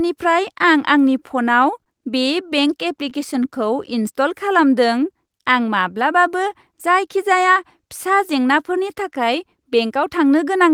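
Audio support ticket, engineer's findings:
Short stall from a late packet, 1.84 to 1.88 s. Sound held about 21 ms too long, slight buzz or dip, nothing lost. Jitter buffer ran dry when a packet missed its slot. Receiver extended the last sound until arrival, resumed in place. Playout delay up 21 ms afterwards.

Scattered short gaps, 2.26 to 3.34 s. Around seven brief ticks and smears, none longer than roughly 15 ms, about 50 ms patched in total, roughly 5% of the stretch. Isolated lost or late packets on the network path. Receiver-side concealment bridged each hole by continuing the previous sound. Net timing shift about 3 ms.

Jitter buffer slow-down, 3.36 to 4.03 s. Speech drags at 94% speed, pitch unchanged, sounds drawn out. Buffer low or target delay raised. Playout repeated pitch periods and pause fragments back to back to rebuild reserve, inserting 44 ms over the span.

Jitter buffer speed-up, 6.72 to 7.5 s. 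Speech hurried at 106% speed, pitch unchanged. Buffer over target, likely from a burst of delayed packets arriving together. Playout cut short pitch-period segments repeatedly, roughly 50 ms removed, to pull latency back down.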